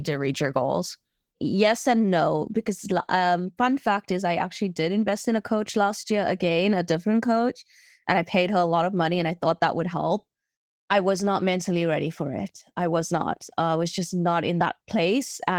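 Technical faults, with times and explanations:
Throughout, Opus voice compression: the encoder runs in hybrid mode, pairing linear-prediction coding below 8 kHz with a transform layer above it, at a rate that points to about 16 kbps, so the excitation is coarsely coded in 20 ms frames, leaving the speech plainly rough and slightly robotic.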